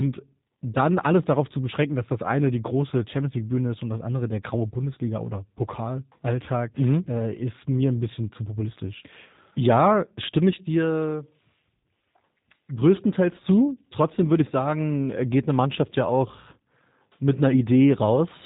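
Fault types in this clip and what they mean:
G.729 codec: speech is rebuilt every 10 ms from a vocal-tract filter, pitch predictor and sparse pulses, giving a plainly rough, synthetic buzz. A spectrogram shows an empty band above 3.8 kHz with smeared harmonics, consistent with 8 kbit/s G.729A.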